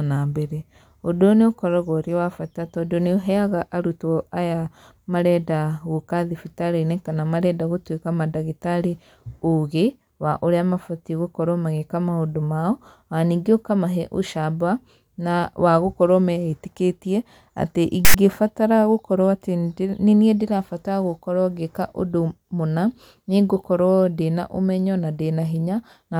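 At 18.05 s the speech breaks into a harsh burst of static that stops at 18.14 s. This is file tags played as audio. A block of text metadata sat where the player expected samples, so the character bytes were decoded as sound. Text bytes fall in a narrow numeric range. That gives a loud rasp pushed off to one side of the waveform. The burst starts and stops with hard edges, lasting under a tenth of a second.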